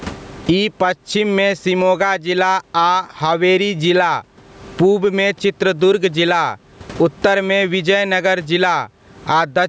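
Gain pumping runs through the whole clip. The gain swings by roughly 25 dB. The speech sounds squashed. The likely cause is gain set far too high, with a fast limiter clamping each peak.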